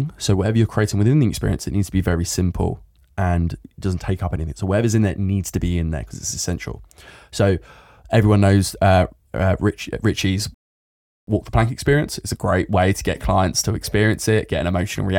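At 10.54 s a rebuffering stall cuts the speech to silence until 11.27 s, then it resumes exactly where it stopped. Unlike a dropout, nothing is lost; about 0.73 s is added.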